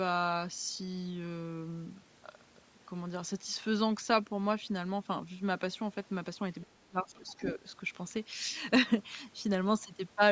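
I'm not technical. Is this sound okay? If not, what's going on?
No. From 6.61 to 6.67 s, and again from 7.15 to 7.51 s, a faint second voice slips in underneath. This is the other side's voice leaking through, likely because the phone's echo cancelling didn't fully remove what its own loudspeaker played. Unlike a real person in the room, it is quiet and comes in scraps.

From 6.66 to 7.67 s, while that other voice is present, the main speech sinks sharply for most of that second. This is speech suppressed in double talk, likely the echo canceller turning everything down when both sides talked at once. The dips line up with the overlap, which sets them apart from a weak connection that cuts out at random.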